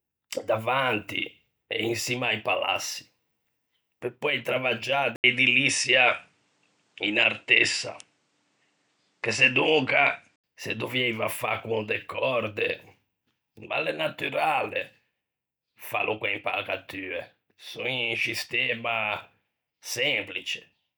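At 5.16 s the speech cuts out for 80 ms. When it returns, the tone has changed. Nothing above 9.7 kHz remains, so it sounds duller and boxy. The level shifts by a few decibels, and a faint new background noise sits far below the voice. This is likely an input switched to a poorer device, with the system swapping its input mid-recording. At 10.44 s the fuller, brighter sound returns.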